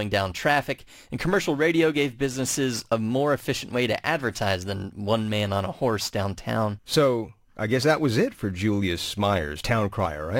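Crude rate conversion runs through the whole speech. Samples were simply dropped to change the rate, which fits a 48 kHz to 44.1 kHz conversion with no filtering. The repeating error sits roughly 25 dB below the speech. It adds a gritty, inharmonic fizz on loud and bright sounds.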